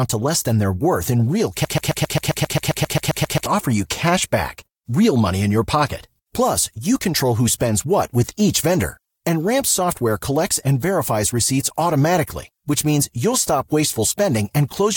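At 1.65 s the speech locks into a broken-record loop: a scrap about 133 ms long plays back to back, identical each time, around 14 times, until 3.46 s. It comes across as a rapid mechanical stutter before the speech picks up again. That's likely a player or stream stall that kept re-sending the last fragment it held, so whatever should have filled those nearly two seconds is simply gone.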